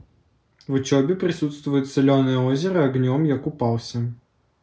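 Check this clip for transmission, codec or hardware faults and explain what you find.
Nothing in this speech recording points to a fault, so there is nothing to report.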